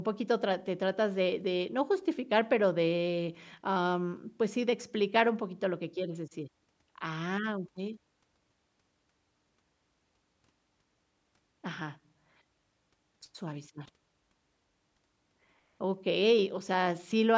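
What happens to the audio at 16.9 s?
Nothing goes wrong at 16.9 s: the speech continues intact through that moment, with no dropout, click or distortion.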